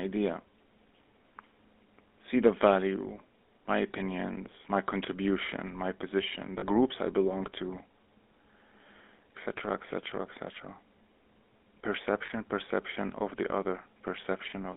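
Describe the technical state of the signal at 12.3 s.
At 12.26 to 12.31 s, two consecutive codec frames failed to arrive intact. This is lost GSM frames, spanning about 40 ms, which fits two standard 20 ms frames. The decoder concealed the gap by reusing the vocal-tract and excitation settings of the last good frame. Across those 40 ms the speech is frozen into a brief, rough, metallic ring instead of carrying on.

Throughout, including at this moment, the speech passes through the GSM full-rate codec. It rebuilds the voice from a vocal-tract model driven by sparse, regularly spaced pulses, at a rate that fits 13 kbps, and the line band runs only from 250 Hz to 3.6 kHz. The damage is plainly audible: a buzzy, gravelly roughness on the voice, with no low bass and no upper brightness.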